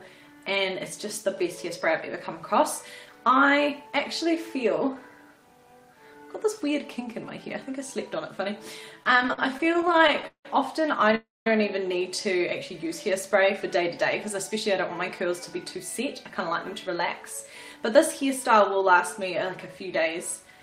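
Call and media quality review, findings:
Repeated stalls (stutter), 9.03–10.46 s. Audio drags and hiccups through 23 short gaps, longest 175 ms. Jitter buffer underruns; receiver extends the last sound each time. About 0.42 s filled, roughly 30% of the span. Nothing lost, only delayed.

Call audio freeze, 11.15–11.47 s. Sound holds as a fading continuation, then goes silent for 200 ms before resuming where it stopped. Likely packets held up in transit and an emptied jitter buffer. Adds about 0.31 s of delay. Nothing missing.

Jitter buffer speed-up, 15.26–17.02 s. Audio runs 3% fast at unchanged pitch. The receiver trims pitch-period slices to drain excess buffered delay, about 50 ms in total. A second episode at 17.76–19.23 s runs 4% fast and trims about 70 ms.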